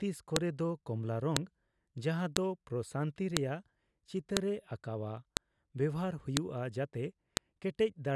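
This is a speech clip with a file header played as audio. A sharp, loud click cuts through at 0.36, 1.37, 2.37, 3.37, 4.37, 5.37, 6.37 and 7.37 seconds. The clicks repeat exactly once per second, whatever the speech is doing. That spacing points to one-second WAV pieces joined or streamed with their headers left in. The few dozen header bytes then play back as samples, giving a brief snap at each join.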